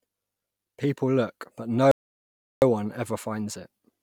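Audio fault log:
1.91–2.62 s: playback stall. The speech stops abruptly mid-flow and the output stays silent for about 0.71 s. It then resumes. The likely cause is the player running out of buffered data, or its output thread being blocked, until it recovered.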